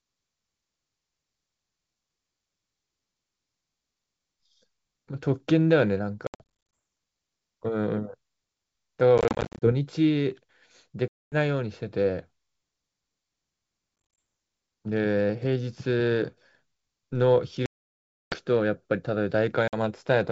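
Packet loss on an ADPCM call at 6.27–6.77, 9.18–9.71, 11.08–11.36, 14.05–14.19, 17.66–18.35 and 19.68 s: silent gaps cut the wideband G.722 speech. Afterwards the decoder's predictor and step size no longer match the sender's, so speech resumes with brief, slight distortion.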